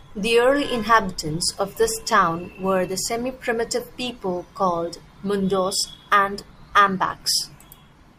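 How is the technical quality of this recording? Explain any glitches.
No glitches or technical faults can be heard here.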